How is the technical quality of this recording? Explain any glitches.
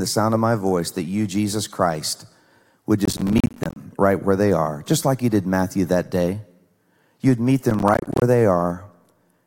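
The recording has two bursts of processor overload crackle, from 3.05 to 3.76 s, just before "right where they are", and from 7.70 to 8.22 s. The processor repeatedly missed deadlines on buffers of around 10 ms, leaving hard-edged silent gaps heard as gritty tearing.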